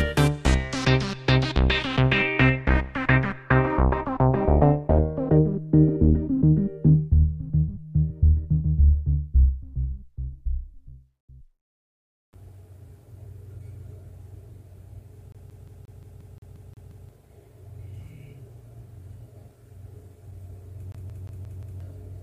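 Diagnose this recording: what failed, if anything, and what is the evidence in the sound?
The CD stuck on one turn during playback: an identical 0.18 s slice repeats from 15.32 to 17.09 s and from 20.92 to 21.80 s, showing as evenly spaced copied blocks with mute gaps.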